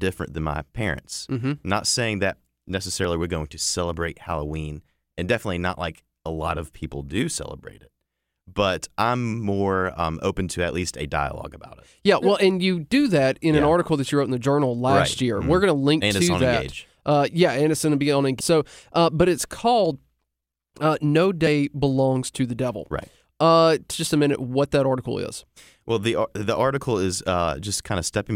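Damaged data in a compressed stream causes four tiny blips at 3.04 s, before "we're going to celebrate"; 18.39 s, after "going to be on"; 21.46 s; and 23.9 s, before "just a minute what". Bad bytes make the decoder misread frames and lose sync.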